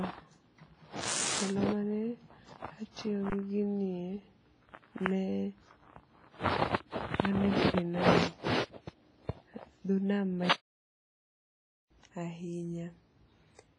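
All the way through the speech there's heavy codec damage, with nothing above 10.4 kHz. It's likely WMA compression at a low bitrate, around 24 kbps. Quantisation noise smears across long transform blocks, so it rings and washes, with hiss breathing along with the voice.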